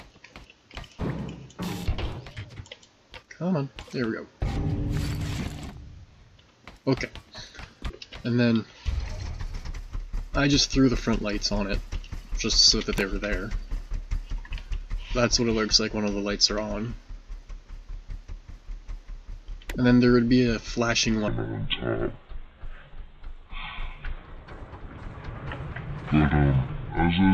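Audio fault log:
21.28–27.33 s, section at the wrong speed: from here to the end the sound turns deep and dragging, running at 0.572 times its proper speed and about ten semitones low, pitch and tempo falling together, likely from playback against the wrong clock.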